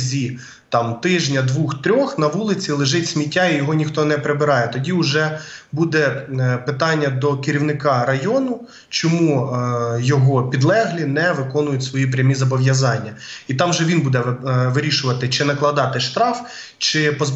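No technical faults can be heard anywhere in the audio.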